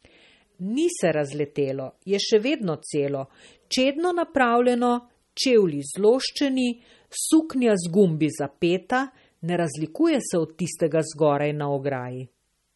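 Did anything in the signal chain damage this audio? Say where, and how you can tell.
Yes. Throughout, the speech sounds watery and swirly, and nothing remains above 11.8 kHz. That points to the codec stage, likely MP3 compression at a bitrate near 33 kbps. The encoder cut the treble and let weak frequency lines flicker between frames.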